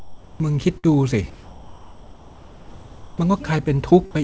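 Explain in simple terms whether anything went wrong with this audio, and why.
Two things went wrong in this speech. From the start to 0.40 s, and again from 1.30 to 3.18 s, the real background disappears. A flat, featureless hiss replaces it, quieter than the room. This is comfort noise in place of the background. The likely cause is that the sender stopped transmitting during pauses and the receiver made up filler noise.

At 0.78 to 0.86 s there is a burst of packet loss. Some audio never arrived. For about 50 ms the receiver stretched out the last sound and let it fade. The speech then jumps ahead, and about 60 ms of it is gone.

The call path carries nothing above 8 kHz.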